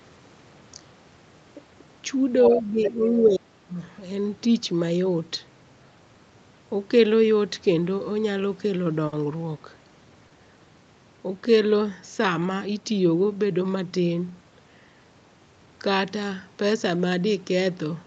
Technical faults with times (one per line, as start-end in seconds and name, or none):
2.43-3.27 other side's voice leaking through
2.54-3.77 speech suppressed in double talk
9.07-9.14 short stall from a late packet
10.28-10.32 short stall from a late packet